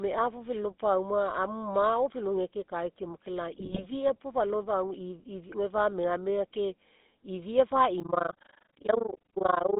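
From start to finish the speech carries the GSM full-rate codec's signature: a buzzy, gravelly texture with the band held to roughly 200 Hz to 3.6 kHz, which fits the 13 kbps full-rate coder. The excitation is rebuilt from a sparse, regular pulse train, and that is where the grit comes from. Plain narrowband telephony would sound muffled but smooth. The damage here is plainly audible and persists the whole way through.

From 3.53 to 3.85 s, just before "puo fa lao gae", GSM bit errors break in. Corrupted bits reached the decoder, and the garbled filter, pitch and gain values bend the spectrum and spike the level frame by frame. That produces squawks, pops and gargling over about a third of a second. A packet loss would leave a gap or a smoothed repeat instead. These sounds are erratic and harsh, and they match an error rate of around 2 percent.

From 8.0 s to the end at 9.79 s, right after "fa megamega ke ifia", overlap-add ripple takes over. 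The frames were windowed and rejoined with an overlap that doesn't sum to constant gain, so the level dips about 60 dB once per frame at around 30 Hz. The result is a rough tremolo. Unlike the bit errors it is perfectly regular, a steady flutter rather than random bursts.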